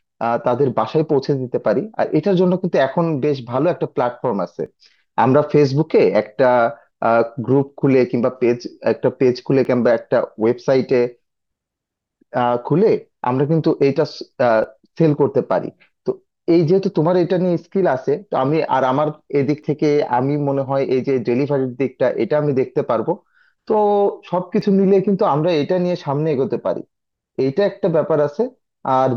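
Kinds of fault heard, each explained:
Audio missing between chunks: a skip of around 10 ms recurs roughly every 5 seconds in this speech, likely from a recorder dropping samples as it switches chunks. On a waveform or spectrogram, each shows as an abrupt seam where the trace jumps without a gap.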